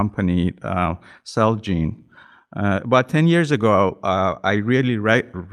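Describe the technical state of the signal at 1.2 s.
At 1.2 s the speech signal is intact, with no audible fault.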